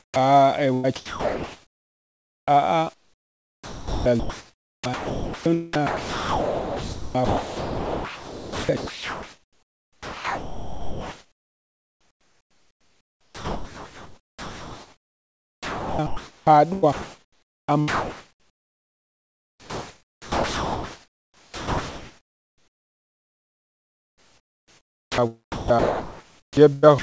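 Speech heard through a call path, with nothing above 8 kHz, which fits a G.722 codec. From 0.00 to 0.16 s the real background is replaced by comfort noise. The steady, featureless hiss sits about 10 dB lower. Later, from 0.74 to 2.48 s, the same flat fill replaces the room. This is likely the receiver filling a pause after the sender stopped transmitting. At 0.11 to 0.16 s the first sound's onset is clipped by the voice detector. About 50 ms is missing. The sound starts abruptly, with no soft beginning. The detector was likely slow to react. From 0.74 to 0.86 s there is a burst of packet loss. About 100 ms of audio never arrived. The receiver stretched the last sound and faded it. Then the audio jumps ahead. The speech is chopped by the voice detector from 2.94 to 5.46 s, 5.73 to 16.47 s, 16.73 to 25.21 s and 25.52 to 27.02 s. Quiet syllables and word edges drop out. The detector is likely toggling transmission on and off.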